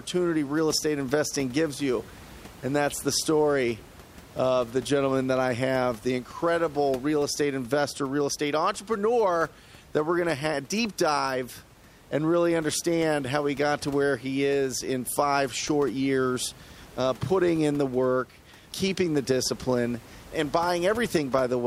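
Speech recording with no technical faults present. A room noise sits about 23 dB below the speech; it belongs to the space around the microphone rather than to the system.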